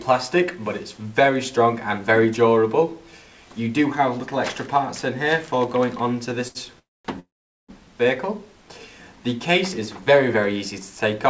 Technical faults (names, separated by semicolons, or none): short stall from a late packet; call audio freeze